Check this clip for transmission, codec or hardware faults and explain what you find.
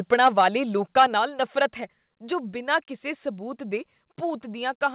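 Two hardware-side faults are audible in this speech recording: microphone overload on two loud passages, each followed by a stepped drop in input level.

Microphone overload occurs from 0.12 to 0.43 s and again from 0.98 to 1.04 s. The peaks exceed full scale by about 4 dB, and the tops of the waveform are sheared flat. In the first passage only a small fraction of samples is clipped. The second passage is much shorter but far denser, with roughly one sample in seven clipped. Both passages carry a harsh, crackly edge, and the second is the rougher of the two. The likely cause is microphone input gain set too high, driving the converter beyond its limit.

The microphone volume stepped down at 0.14 s by about 4 dB and at 1.14 s by about 5 dB. Each change is an abrupt, single-step drop in overall level, affecting the speech and the background equally, with no gradual fade. Each drop follows distortion: the first comes almost at the onset of the first overload, and the second comes about 0.1 s after the second overload ends. 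This pattern is consistent with the call software's gain control reacting to clipping. That reaction is likely what lowered the device's input volume.

The call path is band-limited with nothing above 4 kHz, which fits a narrowband G.711 mu-law link at 64 kbps.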